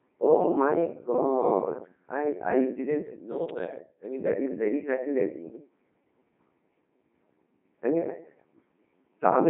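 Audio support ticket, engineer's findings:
Codec 2 vocoder on the path, whole clip. Only pitch, voicing, energy and spectral envelope transmitted; decoder rebuilds speech from sine waves, original waveform discarded. Result: robotic, buzzy speech, heavy damage, band roughly 200 Hz to 3.6 kHz, nothing above 3.8 kHz. Character fits the 2.4 kbit/s mode.

Overlapping chunks, 3.51 to 3.55 s and 5.55 to 5.60 s. Chunked processing, each 2.0 s chunk starting before the previous one ends. About 48 ms replayed at each join, heard as a stutter or click. Spacing matches the 2.0 s chunk length.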